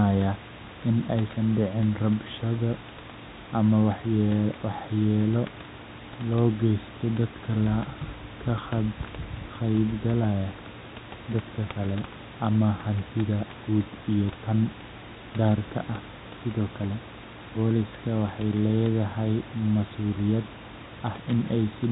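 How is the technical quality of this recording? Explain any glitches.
The technical quality of the recording holds up, and there are no glitches to explain.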